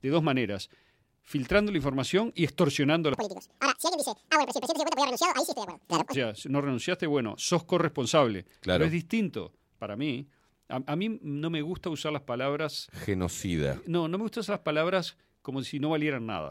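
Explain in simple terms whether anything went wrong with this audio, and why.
From 3.14 to 6.14 s, after "información y extorsionando a", the speech races at double speed and jumps an octave higher, until "sea si no renunciaste". This is audio read two samples at a time.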